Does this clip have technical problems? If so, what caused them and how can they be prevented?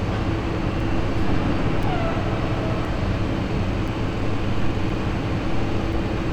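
Yes. Periodic USB or driver dropouts: about every 1.02 s from 0.80 to 5.93 s, a few milliseconds drop to silence, giving regular ticks. Keep background tasks off the audio USB bus.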